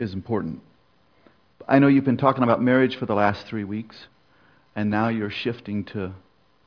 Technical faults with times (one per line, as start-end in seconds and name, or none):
none